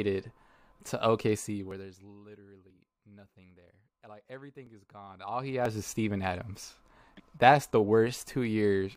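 Tiny skips pop up in the speech at 1.71, 2.70, 4.67, 5.65 and 6.64 s. That's an overlap between stream segments: neighbouring one-second segments claim the same few milliseconds, and the player trims that stretch even though the audio wasn't actually doubled. Between 6 and 17 ms goes missing each time, so the waveform jumps and you hear a tick or tiny skip.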